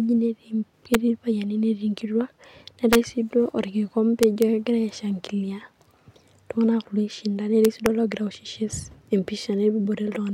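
Integer overflow cracks hit the speech at 0.94 s, 2.93 to 2.95 s, 4.23 to 4.42 s and 7.65 to 7.86 s. Loud peaks ran past the integer limit by up to about 1 dB. Instead of being capped, they wrapped to the opposite sign. Each one snaps harshly, sharper than clipping.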